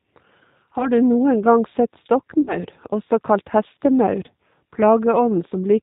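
Throughout, the speech carries plainly audible G.729 codec damage, consistent with the G.729A variant at around 8 kbit/s. The coder resynthesises speech from a vocal tract filter, a pitch predictor and a sparse pulse excitation, so the result is slightly rough and synthetic. Nothing above 4 kHz survives, leaving the sound dull and band-limited.

At 0.78 to 0.88 s there is VoIP packet loss concealed by the speech codec. About 20 ms of audio is missing, which fits one lost packet. The decoder fills the gap by extending its last pitch and filter state at falling gain, producing a brief smear. Because each frame depends on the previous one, the sound remains degraded until about 0.88 s.

A longer concealment follows at 2.41 to 2.59 s. Here 60 ms is lost, which points to three consecutive packets. The extrapolated sound is stretched further and fades. The decoder needs time to rebuild its state afterwards, so the speech stays weak and distorted through to about 2.59 s.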